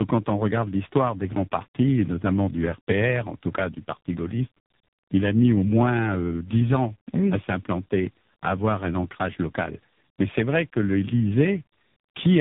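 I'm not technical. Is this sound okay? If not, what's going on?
No. The speech has tandem speech coding throughout: on its way here it passed through two different phone-network speech compressors, one after another, and each one had to work on what the previous one had already damaged. That's why it sounds rougher and more warbly than a normal call would, not just muffled. Everything above about 3.8 kHz is missing too, but plain muffling wouldn't add that stacked, gritty wobble.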